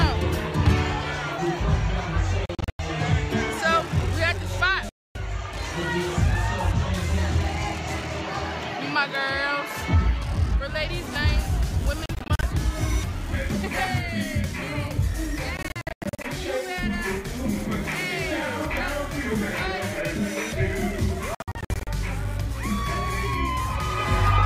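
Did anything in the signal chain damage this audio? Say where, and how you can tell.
Yes: Bluetooth dropouts at 2.46–2.79, 4.89–5.15, 12.06–12.43, 15.57–16.24 and 21.35–21.87 s. Abrupt silences, often broken into several short gaps, cut the audio, which resumes further along as if it kept playing. This is likely the wireless playback link, with packets arriving too late and being discarded.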